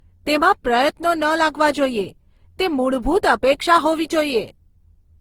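From start to finish the speech has a swirly, hollow quality, with consonant attacks smeared and a watery texture that seems worse than a single encode at this quality would leave, with content reaching up to about 20.2 kHz. That's the signature of generation loss, likely from the audio going through a lossy codec around ten times, consistent with Opus at roughly 48 kbit/s. Each re-encode quantises on a shifted frame grid, so the artefacts stack up.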